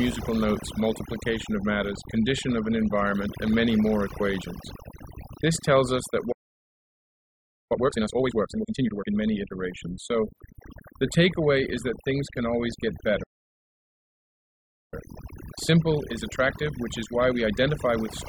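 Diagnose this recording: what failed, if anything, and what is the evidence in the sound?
Overdone noise removal, at the call-processing stage, runs through the whole speech clip. The background sits near silence with twinkling specks. An over-aggressive suppressor is cutting individual frequency bands near its noise estimate, taking quiet speech components with them.

Playback stall: the sound stops mid-flow from 6.32 to 7.72 s, about 1.4 s of silence, and again from 13.23 to 14.94 s, about 1.7 s. The likely cause is the player starving for data or its thread blocking at the playback stage.

Time-compressed catch-up follows each gap. From 7.72 to 9.10 s the speech runs at 2.0 times speed, and from 14.94 to 17.94 s at 1.15 times, with pitch unchanged. The player is cutting and cross-fading short segments to drain its backlog.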